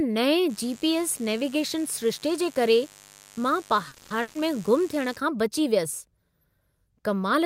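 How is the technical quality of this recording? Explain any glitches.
The recording has three clear faults, all within the first 5.2 s of the speech.

From 0.50 s to 5.16 s a mains buzz sits about 25 dB below the speech. Switching spikes riding the 50 Hz supply leak in, twice per cycle, as a raspy drone. A spectrogram shows stacked horizontal lines at 50 Hz multiples, reaching into the kilohertz range.

At 3.88 s to 4.11 s the sound stalls into a fading buzz or hiss for 220 ms, then carries on exactly where it stopped, nothing lost. This is likely a call audio freeze, delayed packets draining the jitter buffer. The waveform shows a decaying smear, then clean resumption.

From 4.22 s to 4.36 s a burst of packet loss removes 130 ms. The receiver stretches the last sound into a dimming held sound before jumping ahead, so part of the speech is gone. A spectrogram shows frozen, fading bands, then an abrupt change.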